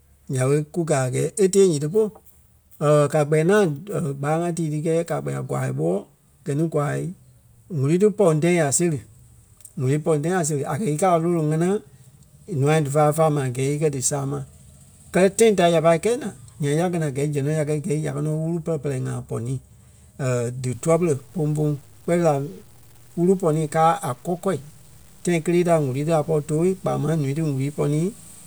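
From 20.74 s to the end at 28.47 s the speech turns gritty and sputters in quiet moments, likely low bit depth without dither, truncated to 8 bits with error around 35 dB below the signal.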